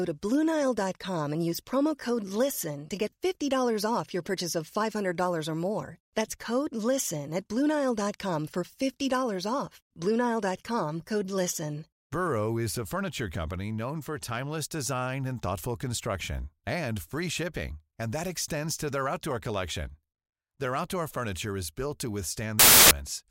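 Between 22.59 and 22.91 s the reader assembles samples from the wrong bytes, so fast-changing low bits dominate each value, turning the speech into loud, harsh broadband noise.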